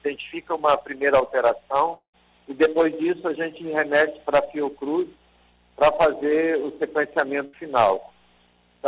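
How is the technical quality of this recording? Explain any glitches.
The recording has two interruptions, and its content stops at 4 kHz throughout, which fits a narrowband call codec such as G.711.

From 1.94 to 2.15 s there is what sounds like a long network dropout, likely caused by audio failing to arrive. About 0.2 s is lost. The last sound is stretched into a fading buzz or hiss, then goes silent. On a spectrogram this shows as smeared, decaying bands followed by a blank gap. The waveform tapers to a flat line.

At 7.45 to 7.55 s a burst of packet loss removes about 80 ms. The receiver holds the preceding sound and fades it rather than cutting it. The spectrogram shows a brief repeated, blurred texture, and the waveform shows a dip before the audio resumes further along.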